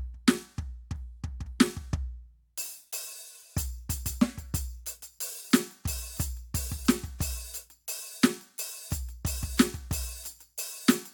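Compressed frames skipped at 3.42 to 3.45 s: the music jumps forward by roughly 20 ms. A short run of encoded frames never reached playback, either absent from the file or rejected by the decoder as corrupt, so the decoder resumed at a later frame, and the music lurches ahead.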